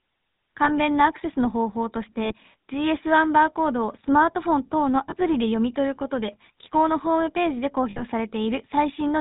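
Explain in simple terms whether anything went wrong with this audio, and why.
Yes, two things went wrong. The whole recording passed through the GSM full-rate codec, the old mobile-phone speech coder. It rebuilds the voice from a simple model of the throat and mouth, driven by coarse, regularly spaced pulses, and it keeps nothing above 4 kHz. The result is plainly audible: a buzzy, gravelly roughness in the voice. Ordinary narrow-band phone audio just sounds muffled. This has an added grainy rasp.

There are also lost GSM frames at 0.64, 2.24, 5.1 and 7.9 seconds. At 0.64 and 5.1 the break lasts about 20 ms. At 2.24 and 7.9 it lasts about 60 ms, which points to three frames in a row going missing. In each case the decoder kept repeating the last good sound, so the speech briefly turns into a rough, metallic ring. A plain dropout would fall silent or click instead.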